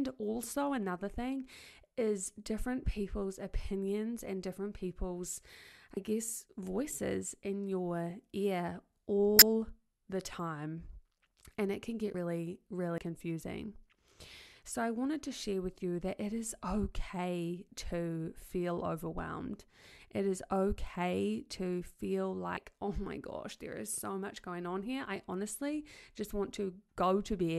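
At 5.97 s the speech jumps forward, and roughly 50 ms of sound is missing, with no gap of silence. The same skip comes back at 12.14 s just after "it can get", at 12.98 s, and at 22.57 s between "is okay to feel" and "oh my". Those three each lose around 70 ms. This is likely a dropped buffer (overrun): the program didn't read its audio before the hardware wrote over it, so the two sides of the lost stretch are joined directly.

From 9.37 to 9.42 s, just after "voices in your ear", there is a short chirpy burst of noise lasting about 56 ms. This is a corrupt frame decoded. Flipped bits in the compressed data gave the decoder wrong gains and misread codes, and it played them anyway. That put energy at the wrong frequencies for the length of what sounds like a few damaged frames in a row.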